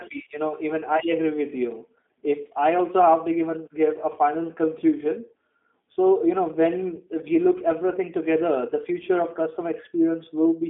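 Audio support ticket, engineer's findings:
G.729 codec damage throughout: speech band-limited to about 200 Hz to 3.5 kHz, nothing above 3.6 kHz; rough, synthetic timbre from pulse-excited filter resynthesis, consistent with an 8 kbit/s G.729A stream.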